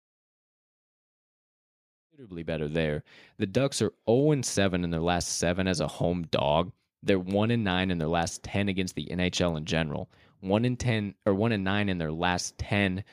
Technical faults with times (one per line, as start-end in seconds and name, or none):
none